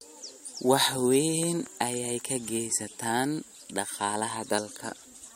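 A sudden voltage step, likely from a plug, switch, static discharge or driver glitch, has been added to this speech recording and then shaped by the following circuitry into a loud pop. It arrives as a pair of sharp pops between 1.43 and 1.69 s, peaking a few decibels above the speech, just before "ayey ka geystaan". The speech carries on underneath the pops without interruption.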